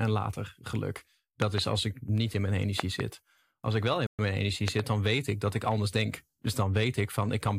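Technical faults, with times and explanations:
1.42–1.60 s, 2.80–3.02 s and 4.68–4.82 s, loud pop: paired sharp thumps, roughly 15–20 dB above the speech, likely voltage glitches; waveform shows tall spikes, spectrogram broadband vertical lines. First follows "later geluk", second "niet in mijn".
4.07–4.19 s, Bluetooth stall: after "ik wel in" the speech drops to 122 ms of silence, then resumes at "mijn energie", likely a drained headphone buffer; flat gap in waveform and spectrogram.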